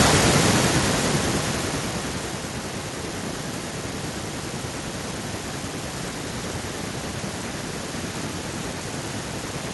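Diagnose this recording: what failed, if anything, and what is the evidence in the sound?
Automatic gain falling, from 0.05 to 2.62 s, in the call-processing stage: the speech starts loud, then sinks by about 15 dB along with its background noise. The automatic gain control judged the input too hot or its background noise too strong, and pulled its gain down gradually.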